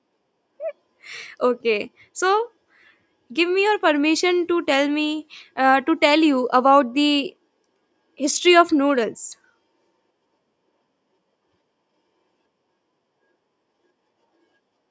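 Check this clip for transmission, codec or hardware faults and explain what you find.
No transmission, codec or hardware faults can be heard in this speech. It has passed through a call's microphone processing as expected: the lowest bass is rolled off, and nothing reaches above 8 kHz.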